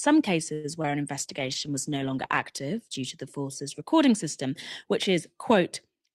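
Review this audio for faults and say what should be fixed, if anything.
From 0.53 to 0.66 s there is a call audio freeze: the last sound is stretched into a fading buzz for about 105 ms, then resumes where it stopped, likely because delayed packets emptied the jitter buffer. An adaptive jitter buffer with more headroom would prevent it.

At 0.82 to 0.86 s, short concealed packet loss leaves a brief smear where about 20 ms never arrived and the decoder extrapolated the preceding sound. Forward error correction or redundancy would recover it.

From 1.19 to 3.38 s, a call bitrate drop from 32 to 13 kbps, held at the lowest rate for about 1.1 s, makes the speech audibly coarser and rougher. A steadier bandwidth estimate would prevent this, along with a higher minimum bitrate.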